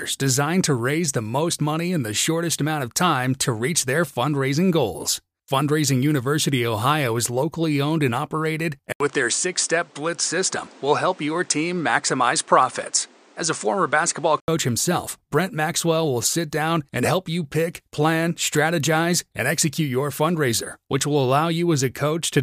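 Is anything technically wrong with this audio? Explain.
Yes. From 8.92 to 14.48 s, just after "locally owned and operated", the input has likely switched to a poorer device: an 80 ms gap, then nothing above 9.9 kHz and a new noise floor about 30 dB down at unchanged level. The gap and fresh noise set it apart from simple filtering.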